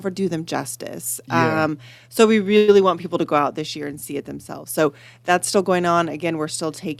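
At 2.57 s the sound stalls for about 0.1 s, the last moment stretched into a short fading buzz before the audio picks up exactly where it left off, now 105 ms later. This call audio freeze likely comes from delayed packets draining the jitter buffer.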